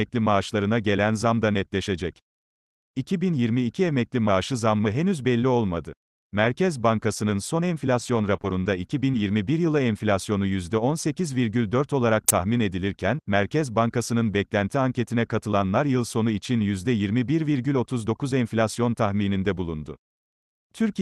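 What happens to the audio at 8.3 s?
Scattered short gaps run from 8.07 to 9.31 s: about three brief packet losses, none longer than roughly 20 ms, totalling 60 ms. The receiver covers each by extending the preceding sound, concealing 180 ms, so the audio stays clear apart from small ticks, smears and hiccups.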